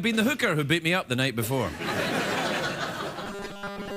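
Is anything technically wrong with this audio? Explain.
Yes. From 3.24 s to the end, the audio likely stopped arriving in time, and a 5 ms fragment was looped to fill the gap while real material was skipped. That robotic sound from repeated short buffers imposes a rigid, metallic 200 Hz buzz over most of the sound.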